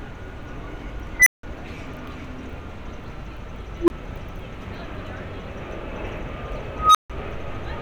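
Three unstable filter bursts: at 1.20–1.43 s a roughly 2 kHz squeal swells over 68 ms, clips, then drops to 171 ms of silence; at 3.79–3.90 s a low, roughly 300 Hz tone builds over 89 ms; at 6.75–7.10 s a roughly 1.5 kHz tone builds over 195 ms. A recursive filter's runaway feedback explains it, seen as an expanding, clipped waveform ending in a flat line and a bright horizontal spectrogram stripe.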